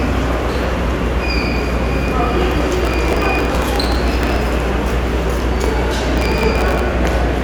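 Processor overload crackle tears through the sound from 2.71 to 4.36 s and again from 6.18 to 6.80 s: tiny buffers of a millisecond or two keep missing deadlines, replaying stale audio as gritty crackle.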